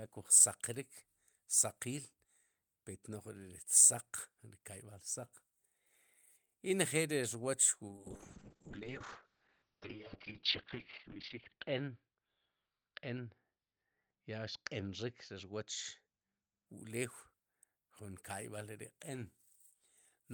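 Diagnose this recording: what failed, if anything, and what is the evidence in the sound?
Call bitrate drop at the codec, forced by the network, 7.88 to 16.72 s: the encoder codes coarsely and cuts everything above 6 kHz, so speech turns rough and muffled.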